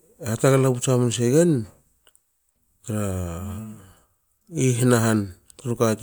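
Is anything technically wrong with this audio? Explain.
No, nothing technically wrong can be heard here.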